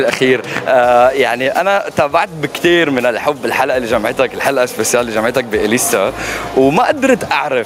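Gain pumping runs through the whole clip. The level never settles. The gain swings by around 15 dB. Loud and quiet parts sit unnaturally close together, so the sound feels squashed. The likely cause is input gain set far too high, with a fast limiter or compressor clamping down on every peak and releasing in the pauses. A single loud pop lands at 0.57 to 0.60 s. It is a sharp, short thump that peaks roughly 5 dB above the surrounding sound, and the audio continues underneath it. It most likely comes from a voltage spike, such as a plug, switch, static discharge or driver glitch, which the circuits after it shaped into a brief click.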